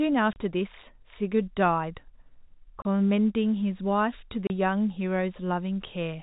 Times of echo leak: none

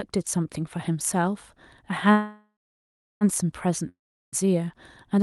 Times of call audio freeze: 2.11-3.24

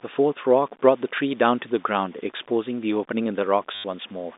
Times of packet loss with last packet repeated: 3.75-3.84

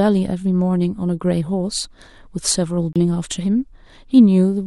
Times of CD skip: 2.93-2.96

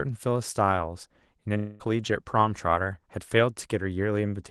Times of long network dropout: 1.57-1.82

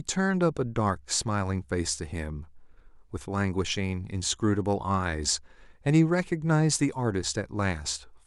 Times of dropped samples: none

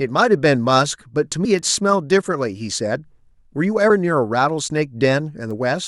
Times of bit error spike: 1.59, 5.51

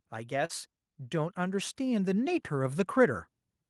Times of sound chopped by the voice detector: none

